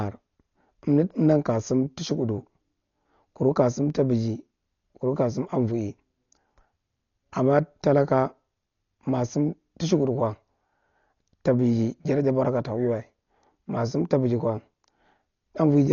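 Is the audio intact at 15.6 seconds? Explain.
No. At 15.6 seconds, as throughout the clip, the speech shows damage most likely from heavy Dolby Digital compression at a bitrate around 40 kbps. Starved of bits, the encoder cuts the band short, leaving nothing above 6.9 kHz, and gives many frequency lines no detail at all, which the decoder fills with dither noise. The result is dull, muffled speech with a rough, fluttering noise clinging to its tonal parts.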